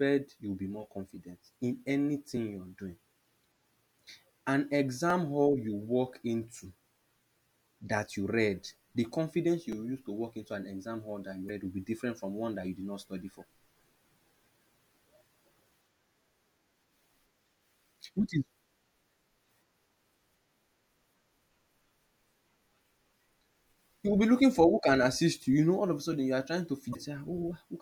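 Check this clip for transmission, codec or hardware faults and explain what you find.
Two faults occur: a repeated buffer four times, and damaged data in a compressed stream twice.

Repeated buffer at 2.37, 5.10, 9.72 and 24.56 s. Playback ran short of new audio, so the device replayed its last block, which fits a buffer of about 5 ms. The block plays twice at each point, and three times at 9.72 s. With a block this small, each repeat sounds like a click or a tiny buzz rather than an audible stutter. Unlike a decoding error, it contains nothing foreign, only a copy of the sound just heard, and the speech continues without a skip.

Damaged data in a compressed stream at 11.46 to 11.50 s and 26.92 to 26.96 s. Bytes in the encoded stream were corrupted, so the decoder misread those frames and lost its place until it found the next valid frame header. Each lasts about 40 ms and sounds like a chirp, squawk, click or short hole.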